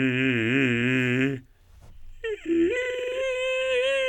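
No technical faults can be heard in this music.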